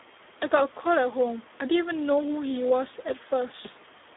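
From start to finish the speech carries heavy Speex codec damage. Speex is a CELP coder, and at this low setting it has too few bits to model the excitation, so the voice comes out hoarse, grainy and edging toward robotic; the degree of damage fits an 8 kbps mode. The audio is also confined to a telephone-style band of roughly 300 Hz to 3.7 kHz, with nothing above 3.8 kHz, giving a thin, muffled top end.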